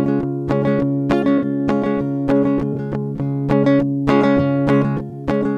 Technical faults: corrupt frame concealed

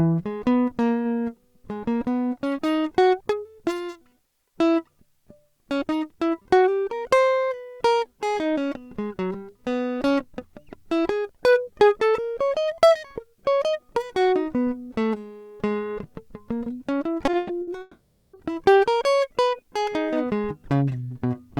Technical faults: repeated packet loss (robotic sound); long network dropout

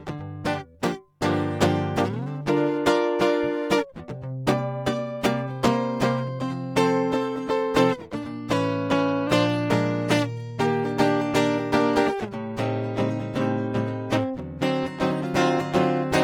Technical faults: drift correction step

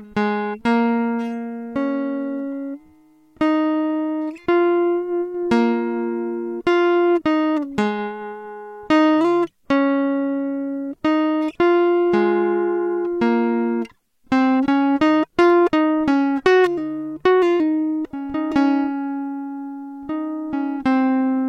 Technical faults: CD scratch ticks

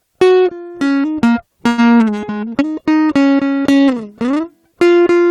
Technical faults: call audio freeze

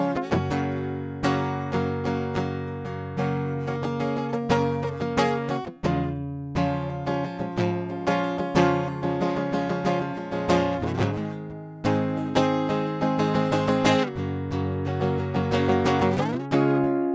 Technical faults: none

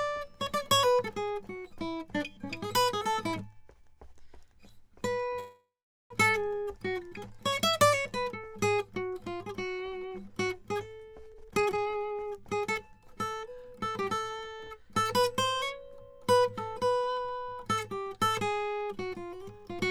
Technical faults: call audio freeze; jitter buffer speed-up

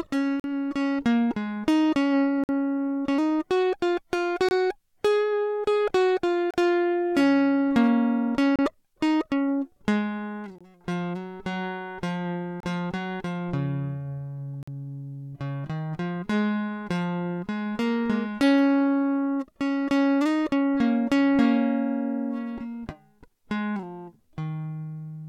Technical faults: gap between stream segments

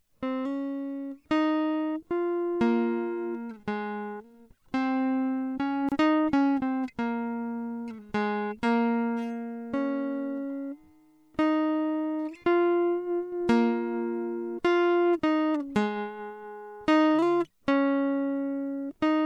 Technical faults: gap at a join of encoded pieces

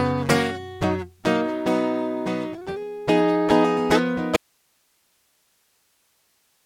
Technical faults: audio dropout to a faint residue

